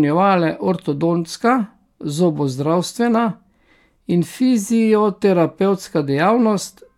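No technical faults are audible.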